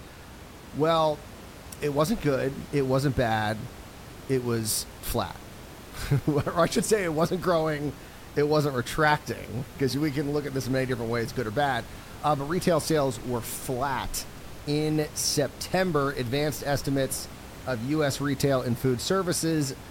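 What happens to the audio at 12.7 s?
At 12.7 s the audio is intact, with nothing but the ordinary room noise sitting well beneath the speech.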